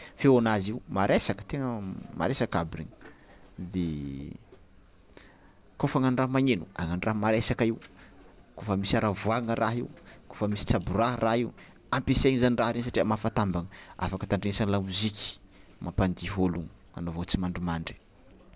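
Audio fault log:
No faults can be heard in this speech recording.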